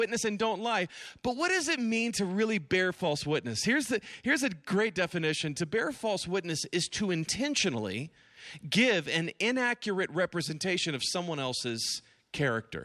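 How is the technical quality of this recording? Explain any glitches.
The recording has no technical glitches to explain. The speech runs without any dropouts, clicks, distortion or interruptions.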